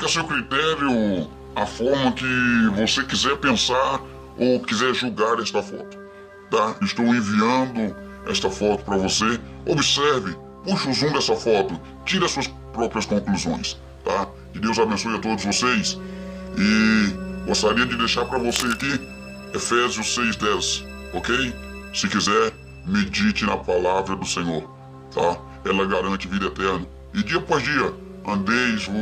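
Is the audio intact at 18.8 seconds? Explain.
No. From 18.49 to 18.81 s, cable scratch noise adds dense, uneven scratching about 10 dB below the sound, likely a worn cable or connector shifting its contact resistance.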